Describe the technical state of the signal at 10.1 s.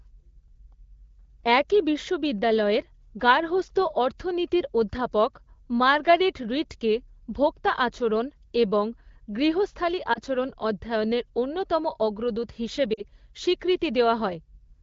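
Between 10.14 and 10.19 s the speech gives a brief dip, then picks up again, just after "ভোক্তা আচরণ এবং গৃহস্থালি" and before "আচরণ অধ্যয়নের অন্যতম অগ্রদূত". These are lost AMR speech frames. The gap fits a single 20 ms frame that failed its checksum, so the AMR-WB decoder bridged it by reusing the previous pitch and vocal tract settings at reduced gain, leaving a short, smeared patch rather than silence.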